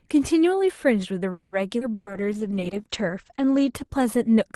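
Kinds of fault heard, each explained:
Call audio freeze: At 1.31 to 1.55 s the sound stalls and the last fragment is stretched into a fading buzz lasting about 210 ms, likely from packets held up in transit draining the jitter buffer. Playback then resumes where it stopped, adding delay without losing audio.
Skip ahead: Around 1.80 to 1.84 s the audio jumps forward, dropping roughly 70 ms while later audio was already waiting. Only about 10 ms of fill bridges the join, so the two sides meet almost directly and the missing fragment is simply absent.
Jitter buffer slow-down: From 1.91 to 2.83 s the receiver rebuilds its reserve by repeating short pitch periods, adding 83 ms. The sound runs at 92% speed with unchanged pitch, so it is drawn out.
Burst of packet loss: From 1.95 to 2.10 s a run of packets never arrived in time. The receiver extends the last sound as a decaying buzz or hiss for 120 ms, then continues further on, with 120 ms of the original audio lost.
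Call bitrate drop: From 1.99 s to the end the encoder falls from 32 to 11 kbps, staying at its lowest for 1.38 s. Audio bandwidth narrows from about 12 kHz to 8 kHz, so the sound becomes muffled and coarser.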